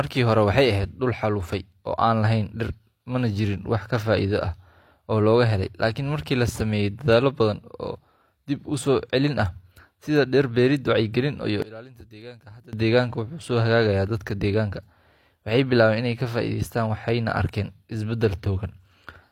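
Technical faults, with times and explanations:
11.62–12.73 s, one channel inverted: after "dhir beerid wacyigelin iyo" the speech drops about 21 dB, likely because reversed polarity cancels the centred content when summed.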